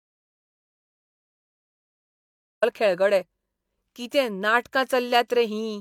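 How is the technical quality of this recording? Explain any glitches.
The recording has one clear technical fault, an audio dropout to silence from the very start through 2.62 s. The input was likely lost, through a disconnected device, a failed link or an accidental mute, while the recorder kept writing silence. The clip therefore opens in silence, with no room tone or background hiss at all, and the speech begins abruptly at 2.62 s. Whatever was said before that point is gone.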